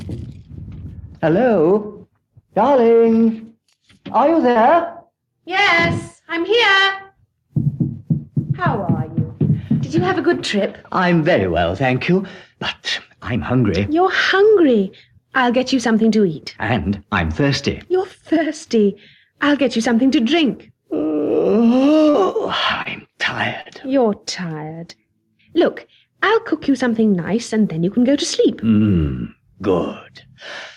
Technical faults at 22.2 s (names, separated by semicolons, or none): gain pumping; short concealed packet loss